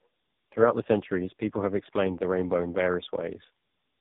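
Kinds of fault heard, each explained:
Tandem speech coding, throughout the clip: the speech sounds like it passed through two low-rate mobile speech coders in a row, with a plain telephone-rate link between them. The second coder had to model audio the first had already smeared, so its errors stack on top of the earlier ones. The result is rough, warbly and muffled, worse than one pass. The final stage sounds like AMR-NB near its lowest rate, and nothing remains above 3.8 kHz.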